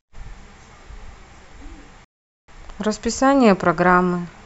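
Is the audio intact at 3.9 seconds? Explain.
Yes, the speech at 3.9 seconds plays through cleanly, with no dropout, click, distortion or other fault at that moment.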